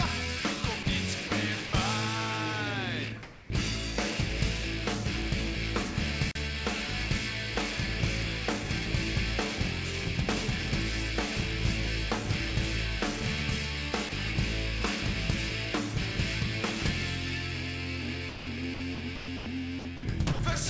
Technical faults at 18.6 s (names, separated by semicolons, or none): sound chopped by the voice detector